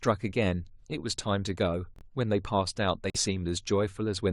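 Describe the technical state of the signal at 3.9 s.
At 3.9 s the speech signal is intact, with no audible fault at that moment.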